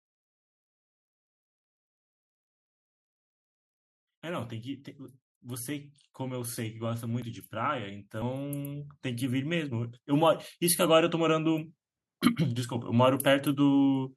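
From 5.41 s to 11.7 s, automatic gain rising lifts the level by about 14 dB. The gain control judged the input too quiet and ramped up slowly, so the speech and the background noise swell together over those six seconds.

At 7.22 s and 8.22 s the speech skips forward, losing roughly 20 ms and then roughly 40 ms. The likely cause is a dropped buffer (overrun): samples were overwritten before being read, and the remaining audio is joined without a gap.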